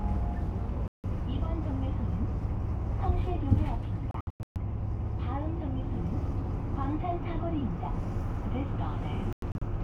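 Everyday sound cuts to silence at 0.88 to 1.04 s, in short broken holes around 4.11 to 4.56 s and 9.33 to 9.62 s: a digital broadcast dropout, where the receiver muted until clean frames returned.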